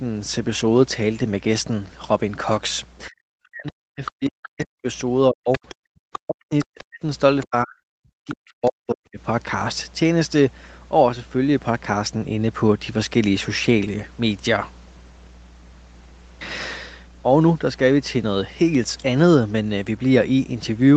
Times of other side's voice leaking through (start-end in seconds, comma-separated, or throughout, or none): 4.06-4.48, 5.52-6.84, 7.41-7.48, 8.28-8.70